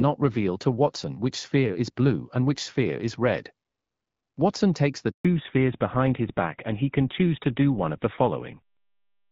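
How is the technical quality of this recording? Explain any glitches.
The recording has two linked faults, both around the middle. Before them, the speech has the clarity of HD Voice, with only light coding damage, which fits AMR-WB at about 12.65 kbit/s.

At 5.11 s there is a handover gap. The call switched networks and no speech frames arrived. The voice dies away and is silent for 140 ms, until 5.25 s.

From 5.25 s to the end there is a fallback to narrowband. The call dropped to an older codec, which fits GSM full rate. Nothing above 4 kHz remains, so the speech sounds duller and rougher.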